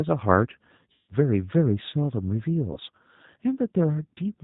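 From start to finish the speech carries plainly audible G.729 codec damage, consistent with the G.729A variant at a rate that fits 8 kbit/s. The codec models each 10 ms frame as a vocal tract filter driven by a pitch predictor and a few fixed pulses, and discards everything above 4 kHz. As a result the speech sounds band-limited and dull, with a rough, buzzy, slightly synthetic texture and no high-frequency detail.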